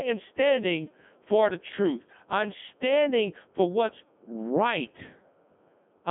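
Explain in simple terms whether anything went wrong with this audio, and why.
Something did go wrong, and it lasts from start to finish. The speech has passed through a Codec 2 vocoder, a low-rate codec built for digital radio. Instead of sending the actual waveform, it sends only a rough description of the voice (its pitch, loudness and tone colour) and the receiver rebuilds speech from simple tones. That is why it sounds robotic and buzzy. The sound is also squeezed into a telephone-like band, with nothing above about 3.7 kHz, so it lacks crispness.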